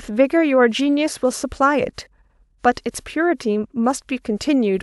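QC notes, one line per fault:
0.78–0.81 s and 1.98–2.07 s, corrupt frame decoded: each event is a short burst of spurious energy cutting across the speech, peaking around -20 dBFS. The decoder played a frame whose bits had been flipped. Misread gains and spectral codes put energy at the wrong frequencies, which is heard as a blip or squeak. Each burst is about as long as one codec frame, which points to a single damaged frame per event.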